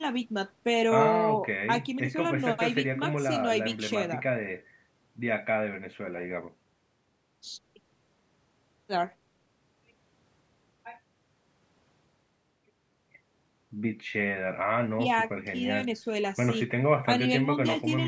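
There are no technical faults to describe in this speech; the only thing to hear is the call microphone processing, which trims the lowest bass and leaves nothing above 8 kHz, as such a path does.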